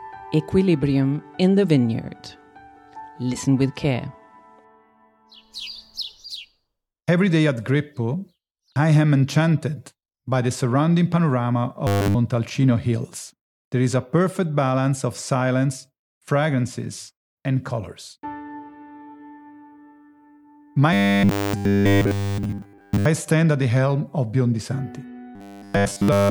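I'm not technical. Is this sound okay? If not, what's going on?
No. The audio has robotic sound from repeated short buffers in three places: 11.87 to 12.18 s, 20.93 to 23.05 s, and 25.35 s to the end. It turns into a stiff, metallic buzz at 100 Hz. The likely cause is new audio arriving too slowly, so the player keeps repeating the last 10 ms in a loop. In the first spot, most of the sound is replaced. In the last two, all of it is.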